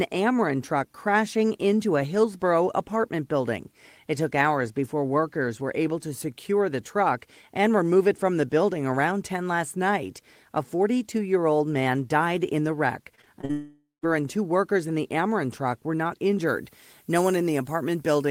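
Repeated packet loss (robotic sound) runs from 13.15 to 13.51 s: several short holes, the longest 41 ms, are patched by repeating sound, leaving the speech choppy.

From 13.51 to 14.05 s a buzzy continuation fades into about 0.16 s of silence before the speech returns with part missing, likely a long network dropout.

Pre-emphasis left on from 16.47 s to the end: the treble boost was never undone, so highs sit about 11 dB up at 10 kHz, sounding thin and sibilant.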